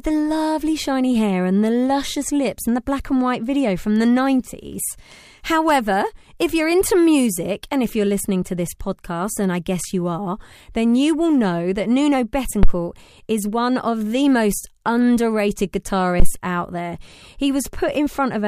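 At 12.63 s and again at 16.20 s the speech is hit by a phantom power thump, a supply switched on or off on a live input so that the voltage step passes through the coupling capacitors. Each is a deep thud peaking near about −2 dBFS and decaying within 25 to 30 ms, over by 12.74 s and 16.33 s. The waveform shows a large one-sided excursion; the spectrogram shows a dense low-frequency smear at each onset.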